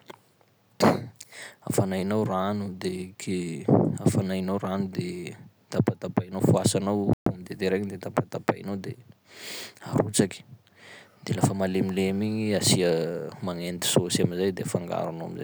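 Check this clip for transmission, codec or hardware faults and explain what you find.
One fault stands out in this speech recording, a playback stall at 7.13 to 7.26 s. The audio simply cuts out mid-flow for about 130 ms, leaving a hard gap of silence before the speech resumes. The likely cause is the player briefly running out of buffered data, or its output thread being blocked, so nothing reached the output until playback recovered.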